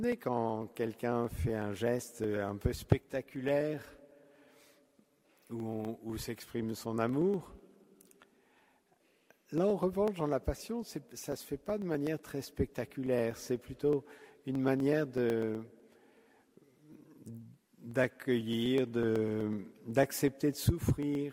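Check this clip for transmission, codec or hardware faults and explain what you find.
There's one fault here: periodic USB or driver dropouts, running from about 0.12 s to 21.15 s. Roughly every 0.124 s, a tiny slice of audio, around half a millisecond, just goes missing and the stream jumps ahead. It points to something stalling the USB bus or the audio driver on a fixed schedule. You hear it as a steady train of small ticks, around 150 of them, and they show up only where there's signal.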